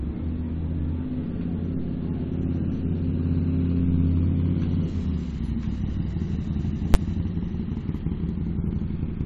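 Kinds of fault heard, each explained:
Invalid numbers at full scale: a processing step produced infinite or invalid values that were forced to the largest positive or negative value. The output is pinned at one extreme value, far beyond the audio's peaks, for a 10 ms block at 6.94 s, which is short enough to come across as a single loud bang.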